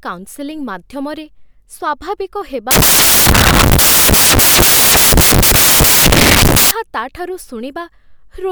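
Samples built from the wrong bytes run from 2.71 to 6.71 s. The reader assembles each sample from misaligned or swapped bytes, so the rapidly changing low-order bits become the dominant part of each value. The speech is replaced by loud, harsh broadband noise, close to white on the louder sounds.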